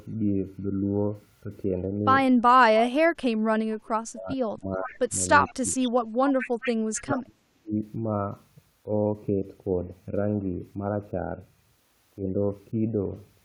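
From 2.80 to 5.11 s the speech is repeatedly pulled down, at worst by around 40 dB, for roughly a second and a half in total. This is speech suppressed in double talk, likely an echo canceller ducking the talker while the far side also spoke. On a spectrogram the harmonics and upper bands drop out in blocks, and the waveform shows abrupt notches in the envelope.

At 4.83 to 4.97 s a faint echo leak appears: a copy of the speech delayed by 436 ms, about 15 dB below the direct sound. This is likely residual loudspeaker pickup that the far end's canceller left in. On a spectrogram it shows as a weaker, shifted duplicate of earlier harmonic patterns.

From 5.47 to 5.91 s the leak returns, now about 20 dB down. Within it, 5.49 to 5.66 s brings a brief suppression of about 20 dB lasting roughly a tenth of a second, visible as a shallow envelope dip.

From 6.39 to 7.19 s the 436 ms echo leaks again at about 15 dB down. 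Overlapping it, 6.62 to 7.73 s carries deep suppression near 40 dB, totalling about a second, seen as chopped, hollowed-out energy in both views.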